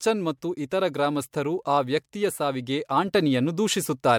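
Throughout the speech there is generation loss: a swirly, hollow smear with blurred consonant attacks and nothing above 19.9 kHz, likely from MP3 encoding repeated about four times near 100 kbit/s. A single pass at that rate would sound cleaner, so stacked re-quantisation explains the damage better than low bitrate alone.

At 3.08 s, just after "ಗ್ರಾಮಸ್ಥರು ಆ ವ್ಯಕ್ತಿಯ ಸಾವಿಗೆ", a sudden gain jump lifts everything by about 4 dB until the end, likely a digital gain step applied without a ramp. Background noise rises with the speech, which rules out a speaker simply getting louder.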